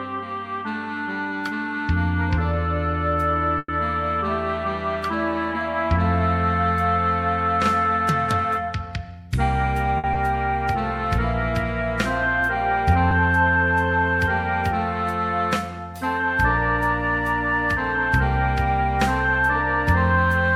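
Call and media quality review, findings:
Call audio freeze, 3.58–3.69 s: last sound continues as a fading buzz or hiss, then about 30 ms of silence; nothing missing, playback resumes where it stopped. Likely jitter buffer underrun from delayed packets. Adds about 100 ms of delay.

Jitter buffer speed-up, 8.86–9.28 s: audio runs hurried at 114% speed, pitch unchanged. The receiver drains excess buffered audio by cutting short pitch-period slices repeatedly, around 70 ms in total, to bring latency back down.

Short stall from a late packet, 9.98–10.05 s: sound held about 60 ms too long, with a faint buzz or dip. The packet arrived after its playout time, the buffer ran dry, and the decoder stretched the last frame. Nothing lost; delay rises 60 ms.

Short concealed packet loss, 10.14–10.16 s: brief smear or wobble. About 20 ms never reached the decoder in time. The receiver bridged the gap by extending the preceding sound for about 10 ms, then crossfaded back to the real audio.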